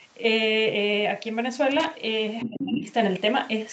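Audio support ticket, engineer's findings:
Loose connector crackle, 1.71 to 1.87 s: irregular scratchy burst lasting about 0.16 s. Probable component is a worn or dirty plug or jack. Intermittent contact chops the signal, and any DC on the line turns each break into a pop.

Other side's voice leaking through, 2.40 to 2.93 s: a second voice sits under the talker, only a few dB below, within the 8 kHz call band. Likely cause is far-end loudspeaker playback reaching the mic that the echo canceller did not fully subtract.

Speech suppressed in double talk, 2.45 to 2.88 s: the talker's level dips in pieces, at worst by around 20 dB, over roughly 0.4 s. It overlaps the leaked far-end voice. The canceller likely could not tell near-end speech from echo while both sides talked, so it attenuated both.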